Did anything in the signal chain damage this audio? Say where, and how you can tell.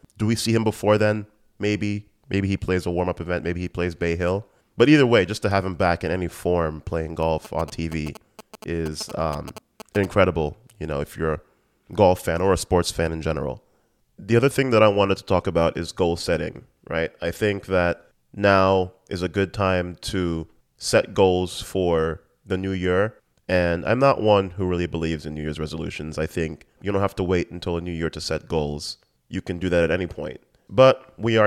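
Yes. From 7.23 to 10.06 s a galloping dit-dit-dit of short buzzes rides under the speech, roughly 15 dB below it, with the buzz pitched at about 217 Hz. These are GSM signalling bursts picked up in the analogue wiring. A nearby 2G phone was exchanging short groups of radio bursts with the network, and a junction in the audio circuit rectified that RF. Its 217 Hz frame rate ended up in the audio as buzz.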